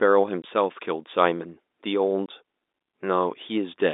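Packet loss filled with silence at 0.42–0.44 s and 2.26 s: each 20 ms gap, which fits a single lost packet, was replaced with silence, cutting the speech with hard edges over the narrowband G.711 telephone sound.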